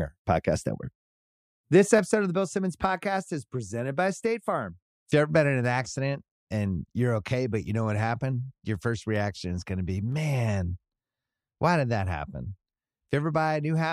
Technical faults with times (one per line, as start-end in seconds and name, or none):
10.12 dropped samples